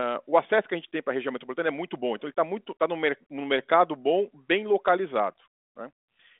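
No technical faults are audible.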